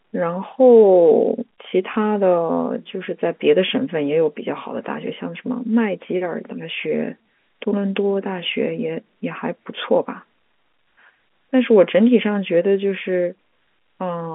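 At about 1.94 to 1.96 s there's packet loss with the last packet repeated: a 20 ms gap, which fits a single lost packet, got filled by replaying the previous chunk. You hear a small blip over the narrowband telephone-style speech.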